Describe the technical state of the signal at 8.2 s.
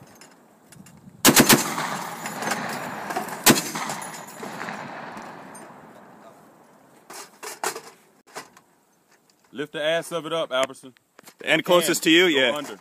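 A hole of silence about 57 ms long opens in the continuous sound from 8.21 to 8.27 s, with smeared edges, before the audio resumes exactly where it stopped. It is a gap at a join of encoded pieces: separately encoded segments were joined untrimmed, keeping each encoder's start-up delay and final-frame padding.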